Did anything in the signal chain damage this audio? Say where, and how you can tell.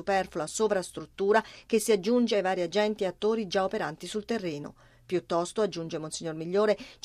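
No, nothing in the signal chain stood out as having damaged this audio on listening.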